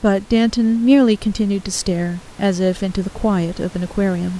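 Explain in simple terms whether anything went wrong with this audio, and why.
Nothing went wrong; no faults can be heard here.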